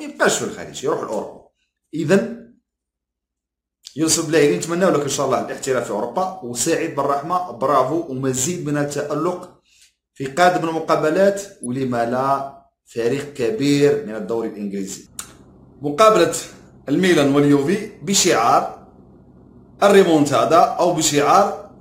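At 11.63 to 11.66 s a corrupt frame is decoded: a single compressed frame arrives with flipped bits, and the decoder plays it anyway. The misread gains and codes put energy at the wrong frequencies for about 26 ms, heard as a short squeak or blip. On a spectrogram it shows as a narrow vertical patch of stray energy across unrelated bands. In the waveform there is a brief burst peaking around -20 dBFS.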